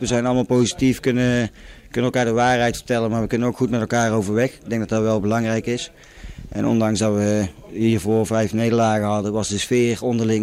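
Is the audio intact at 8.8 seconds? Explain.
No. Clock drift between sender and receiver is present here: the sender's clock runs about 4 percent slow, so the receiver's buffer keeps draining and small hiccups recur, visible as tiny waveform seams.

The repeated timing corrections run from 0.12 to 10.28 s. The receiver repeats short pieces to keep pace, adding roughly 0.4 s overall, so 8.8 s falls within this stretch. On a spectrogram these show as duplicated slivers at uneven intervals.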